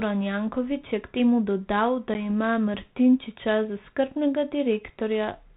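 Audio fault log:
2.14 to 2.25 s, packet loss on an ADPCM call. About 10 ms of the speech drops out into a hard-edged silent gap, which fits roughly one lost packet. The gap is brief, but the recovery takes longer. The decoder's adaptive predictor and step size no longer match the sender's after the hole. So the speech comes back with some distortion, and settles by 2.25 s. The light G.726 coding at 32 kbit/s can be heard around it.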